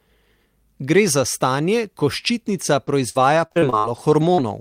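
Repeated packet loss, giving a robotic sound, runs from 2.73 s to 4.40 s. Over that stretch the stream keeps dropping short runs of audio, eight holes in all, the longest about 57 ms. Each hole is bridged by extending the sound that came just before it, roughly 0.3 s of patched audio in total, around a sixth of the span. The quick succession of these fills makes the speech choppy and robotic, with small pieces missing.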